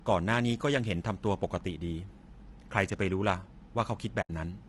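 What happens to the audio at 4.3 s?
At 4.3 s the sound is just coming back out of a gap. From 4.21 to 4.30 s the audio drops out for about 80 ms. This is AAC frame loss with muting. Packets of coded audio went missing, and the decoder replaced their spectrum with silence. The gap fits roughly four lost frames. Overlapping windows taper the sound down into the hole and back up at 4.30 s. So the edges are soft.

The surrounding audio sounds rough and grainy throughout, including at this moment. There is a hiss-like fill between the pitch harmonics. The top band sounds thin and somewhat synthetic. The likely cause is low-delay AAC compression, the AAC-ELD style used for video calls, at a low bitrate of around 32 kbps. At this low bitrate the damage is plainly audible.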